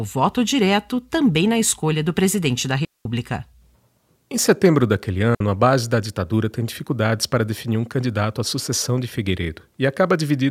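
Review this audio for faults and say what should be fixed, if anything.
Digital wireless dropout at 2.85 to 3.05 s, just after "escolha do presidente da", and again at 5.35 to 5.41 s, between "setembro daquele" and "a base da ditadura". The receiver lost too much of the radio data stream and muted rather than play corrupted audio, leaving clean holes of near silence, about 207 ms and 60 ms long, with very short fades and no noise burst on either side. To prevent it, keep clear line of sight between transmitter and receiver antennas and choose a less congested channel.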